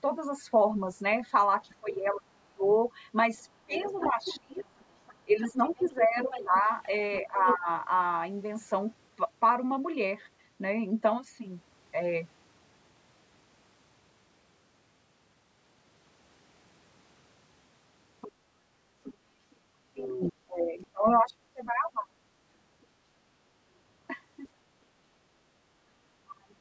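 Speech suppressed in double talk first appears from 1.67 to 2.64 s, where the speech dips by about 25 dB. When both ends talk at once, the echo canceller likely cannot tell its own talker from the loudspeaker echo, so it turns everything down. Other side's voice leaking through follows from 3.38 to 7.55 s, a second voice about 10 dB under the speech, probably residual loudspeaker echo the canceller failed to remove. It overlaps a longer suppression from 3.66 to 7.68 s, with the main speech pulled down by about 25 dB. Fainter leakage returns at 18.21 to 19.14 s (about 20 dB down), and again at 20.83 to 21.71 s (about 30 dB down), inside another suppression from 19.94 to 22.09 s. A tiny scrap of leakage surfaces at 24.43 to 24.48 s, about 40 dB down, and a final suppression of about 35 dB runs from 26.21 s to the end.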